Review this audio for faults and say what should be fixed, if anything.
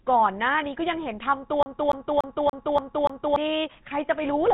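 GSM full-rate codec damage runs through the whole clip. The speech has the gravelly, buzzy roughness of a codec that models the vocal tract and drives it with a sparse, regularly spaced pulse train, keeping only a fraction of the excitation detail. Nothing is present above 3.8 kHz, and the degree of damage fits a 13 kbps GSM full-rate stream. To prevent it, capture or route the audio over a wideband path rather than through a legacy GSM leg.

A CD stuck on one turn runs from 1.63 s to 3.36 s. The same 289 ms slice of speech plays six times over, each pass separated by a brief mute where the pickup jumps back a track at the same point on every revolution. The result is the fast, even stutter of a skipping disc. To prevent it, replace or resurface the scratched disc, or rip it with an error-correcting extractor before use.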